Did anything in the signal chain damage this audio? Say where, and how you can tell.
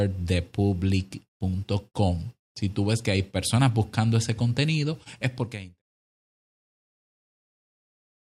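No, nothing stood out on listening, and the smooth fade-out that begins around 5 s and reaches silence at 5.83 s sounds like a deliberate edit rather than damage.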